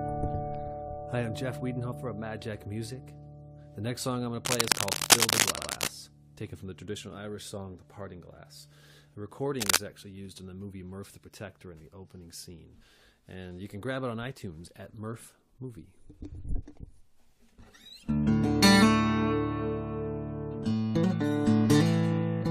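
A run of compressed frames was played more than once between 0.87 and 0.89 s. A single block of about 23.2 ms, a length that fits one 1024-sample frame at 44.1 kHz, is heard again, so the sound catches on itself. The clip runs 23.2 ms longer as a result.

From 4.45 to 5.89 s there is cable scratch noise, likely from a worn cable, connector or control being moved so that its contact resistance jumps about. Dense, uneven bursts of scratching and rustling sit a few dB above the sound for well over a second.

Inside that stretch, at 5.56 to 5.70 s, a 69.7 ms block, which points to three such frames, plays twice more. This produces a stutter and adds 139.3 ms.

A shorter burst of the same scratching returns from 9.59 to 9.77 s.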